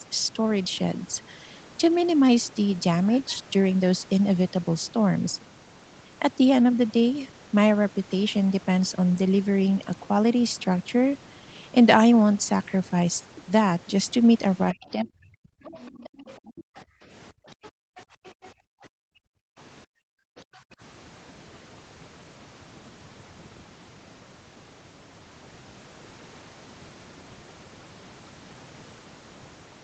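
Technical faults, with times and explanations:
Throughout, overdone noise removal: an over-strong noise reducer cuts frequency bands near its noise estimate, leaving a lowered, twinkling background.
14.72–15.51 s, speech suppressed in double talk: the echo canceller likely mistook overlapping talk for echo, pulling the voice down by up to about 40 dB for roughly 0.7 s.
15.64–16.8 s and 17.64–18.49 s, other side's voice leaking through: residual loudspeaker sound, likely left by incomplete echo cancellation, surfaces faintly, about 25 to 30 dB below the talker.
16.12–20.77 s, background gated by the echo canceller: the canceller clamps the microphone while the loudspeaker plays, so room sound drops by up to about 40 dB, roughly 3 s in total.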